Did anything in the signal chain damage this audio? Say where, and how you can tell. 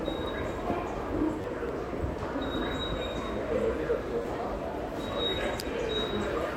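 Yes. At the driver or buffer stage, audio arrived late twice, and the device replayed its last buffer two extra times, at 1.42 to 1.44 s and 4.22 to 4.25 s. This repeated buffer fault is heard as a brief hard-edged buzz, with repeats of about 10.7 ms (which fits a 512-sample buffer) and roughly 20 ms of sound lost each time.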